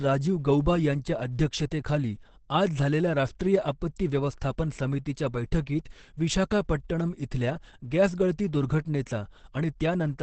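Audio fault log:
throughout: Opus compression. The speech sounds muffled and hoarse, with nothing above 8.7 kHz. This is likely a heavy speech-mode Opus encode near 12 kbps.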